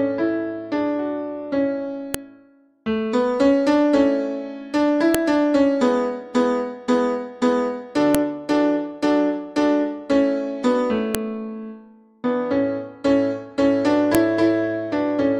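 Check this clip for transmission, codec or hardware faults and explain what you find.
There is one fault, repeating: a file header played as audio, heard at 2.14, 5.15, 8.15, 11.15 and 14.15 s. Pieces about 3 s long were joined with their WAV headers left in, so those header bytes play as samples, giving a sharp, loud click at each join regardless of the surrounding sound.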